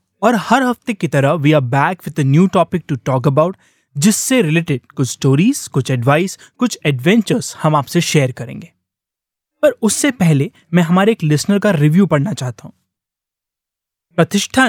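Nothing in the recording stands out as a technical fault; the speech carries on steadily with no interruptions or glitches at any point.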